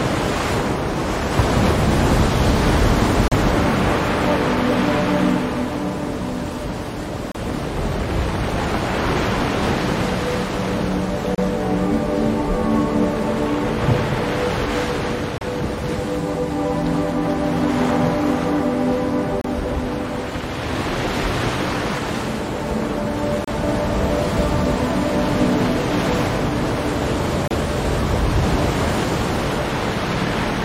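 Brief holes of silence open in the continuous sound at 3.28, 7.32, 11.35, 15.38, 19.41, 23.44 and 27.48 s, roughly every 4 seconds. The first lasts about 37 ms and the rest about 32 ms, each with smeared edges before the sound resumes where it stopped. These are gaps at a join of encoded pieces: separately encoded segments were spliced untrimmed, leaving each run's leading encoder delay and final-frame padding in place.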